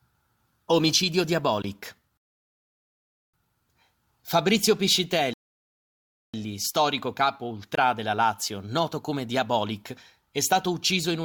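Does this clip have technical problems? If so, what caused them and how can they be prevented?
Yes. A block of digital silence appears at 1.62–1.64 s and again at 7.75–7.77 s. Each time the sound drops abruptly to silence for about 21 ms and snaps back. A gap that length fits one 1024-sample audio buffer that the program failed to fill before the output device needed it. Larger buffers, or giving the audio thread higher priority and keeping slow work off it, would prevent these dropouts.

A rebuffering stall occurs at 2.17–3.34 s and again at 5.34–6.34 s. The player ran out of downloaded audio and went silent until more arrived, adding about 1.16 s and then 1.0 s, and the speech then resumed exactly where it had stopped, with nothing missing. Buffering more audio ahead of playback, or adapting to a lower bitrate when the connection slows, would prevent these stalls.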